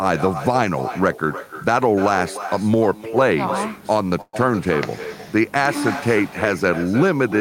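From the start, every phrase is shadowed by a thinner copy about 12 dB quieter, arriving roughly a third of a second later. This is echo with no canceller: the far end's loudspeaker feeds its microphone, and nothing removes it.

From 4.21 to 4.36 s there is a call audio freeze. The last sound is stretched into a fading buzz for about 118 ms, then about 30 ms of silence, and the audio resumes with nothing lost. Delayed packets likely emptied the jitter buffer.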